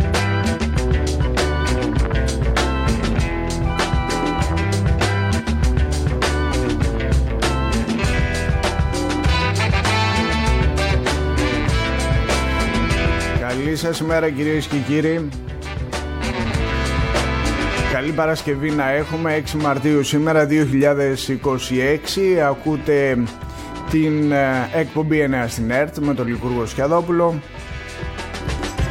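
No technical faults can be heard anywhere in the audio. There is nothing here that needs a timestamp or further comment.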